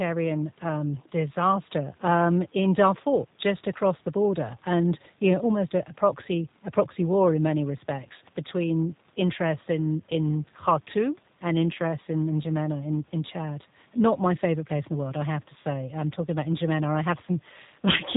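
Throughout, G.729 codec damage: the speech is cut off above 4 kHz and sounds rough and synthetic, unlike simple band-limiting, which stays smooth.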